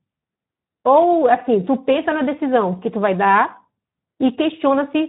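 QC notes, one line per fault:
Throughout, Speex codec: the speech has a grainy, hoarse edge, and the damage is plainly audible all the way through. Speex is a CELP coder, so it rebuilds the voice from a predicted spectral envelope plus a coded excitation. At this low setting the excitation gets too few bits and comes back rough and noisy. Nothing sits above 3.8 kHz, so the top end is dull and boxy. That fits a narrowband mode at around 11 kbps.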